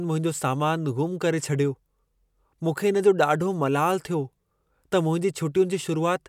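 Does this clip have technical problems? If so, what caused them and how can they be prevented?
No, this clip has no technical problems, so there is nothing to prevent.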